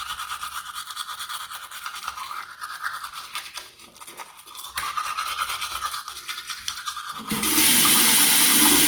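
From start to finish the audio sounds grainy and rough, with tonal parts turning noisy rather than swirly, which is likely Opus compression in its music mode. It points to a low bitrate around 24 kbps, where bands get filled with folded or noise content, though the bandwidth stays full, up to about 20.1 kHz.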